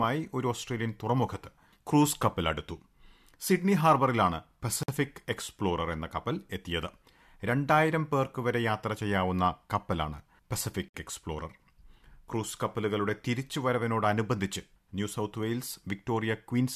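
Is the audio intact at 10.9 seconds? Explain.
No. At 10.88 to 10.94 s the speech drops into a silence of about 59 ms: a gap at a join of encoded pieces, and one such join in a pattern repeating every 6 s. Each piece was encoded on its own, and the encoder's start-up delay and last-frame padding stayed in when they were joined. The speech then resumes where it stopped. A waveform shows a flat stretch with smeared edges; a spectrogram shows a blank vertical band across all frequencies, its edges slightly smeared.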